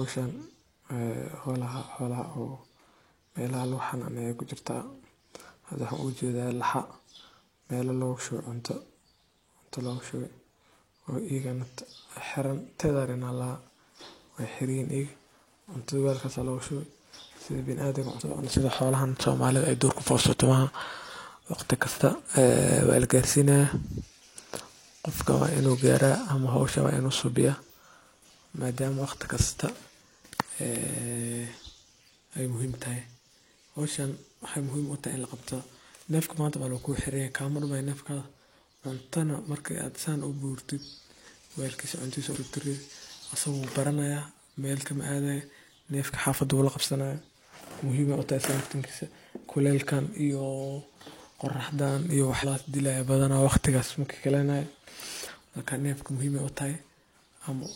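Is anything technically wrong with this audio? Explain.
Yes. Compressed frames are skipped three times: 18.16–18.22 s, 42.31–42.37 s and 52.39–52.45 s. The decoder drops whole frames, and the speech jumps ahead by roughly two, two and three frames, about 0.1, 0.1 and 0.15 s of lost audio. That fits a frame of about 46.4 ms. A waveform shows an abrupt envelope discontinuity, and a spectrogram shows a short broadband smudge where the harmonic tracks break and restart.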